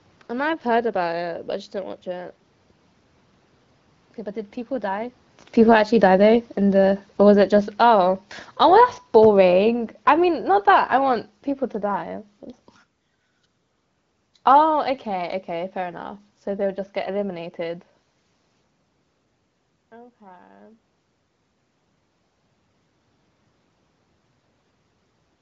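At 5.55 s, just after the talker comes closer, automatic gain falling sets in: the gain control judges the louder input too hot and pulls its gain down by about 13 dB over the next 6.6 s, to 12.12 s. The speech and room noise sink together, visible as a waveform envelope tapering steadily rather than stepping down.

From 19.9 to 20.9 s comes automatic gain rising, after the talker moves away near 19 s and the input drops by about 18 dB. The control lifts its gain by about 4 dB over one second, so speech and background swell together. On a spectrogram the whole band, capped near 7.5 kHz by the wideband codec, brightens evenly.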